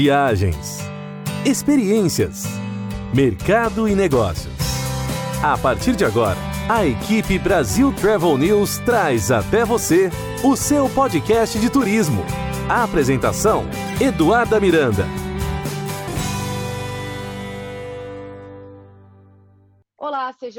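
Nothing technically wrong turns up anywhere in this audio, so there's no fault to point to and no cause to explain.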